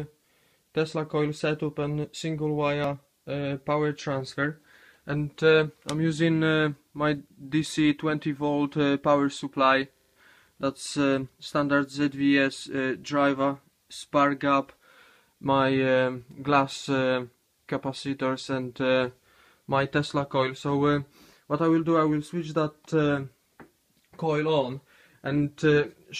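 From 9.96 to 10.16 s comes a system hang loop. The system stalled while the hardware replayed one 40 ms slice of its ring buffer five times, a rattling 25 Hz stutter. Unlike a dropout, nothing falls silent and almost no audio is lost.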